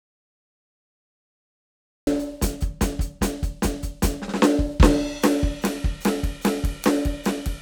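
From the very start until about 2.07 s the music is simply absent, an audio dropout to silence already under way when the clip begins. It's plain silence, no room tone at all, and the music then comes in mid-flow. Most likely the input was lost and the recorder kept writing zeros.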